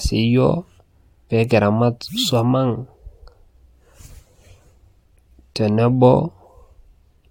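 No technical faults are audible.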